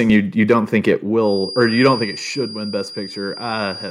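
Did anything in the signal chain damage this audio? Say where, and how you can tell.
Yes. Microphone overload appears at 0.12–0.18 s, 0.50–0.54 s (just before "think it") and 1.62–1.88 s, with peaks pushed about 1, 2 and 3 dB past the converter's limit. The flattened tops give a harsh crackle, likely from excessive input gain clipping the converter.

Microphone volume stepped down at 1.02 s, right after "think it", by about 4 dB, and again at 2.04 s by about 3 dB. Speech and background drop together in one step, likely call processing cutting the device's input gain after detecting those clipped peaks.

A feedback whistle starts at 1.17 s, after "think it", and runs to the end: a steady 4.8 kHz tone sitting well below the speech and swelling and fading slowly. It likely comes from the loudspeaker-to-microphone acoustic loop hovering at the threshold of feedback without building up.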